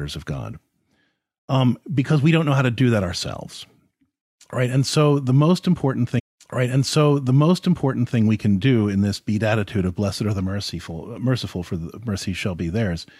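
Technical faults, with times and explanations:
6.18 to 8.18 s, stream segment repeated: after "so the most important", the player queued the same segment twice, so 2.0 s plays again before "we can do in". The waveform shows an identical two-second block repeated, and the spectrogram shows a thin vertical blip at the jump back.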